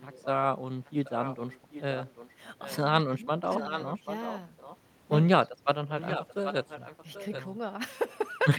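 Echo leak runs from 0 to 0.27 s, 0.85 to 2.3 s and 2.64 to 2.76 s. You hear a copy of the speech trailing 786 ms behind, about 25 to 15 dB down. That's likely a loudspeaker's echo slipping past the canceller. Speech suppressed in double talk comes at 3.11 to 3.17 s, a quick dip of around 10 dB, likely the canceller turning its own talker down along with the echo while both sides talk. The echo returns at 3.5 to 4.38 s and 4.58 to 4.77 s. Another suppression at 5.41 to 5.55 s drops the speech about 15 dB. The echo's last and loudest stretch, 5.88 to 7.42 s, sits only about 10 dB under the speech.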